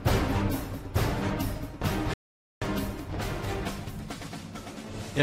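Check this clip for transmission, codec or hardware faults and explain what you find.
There's one fault here, a playback stall. At 2.14 s the sound just stops dead and stays silent for about 480 ms, resuming at 2.62 s. That gap is likely the player starving for data or its thread getting blocked, so output halts until it catches up.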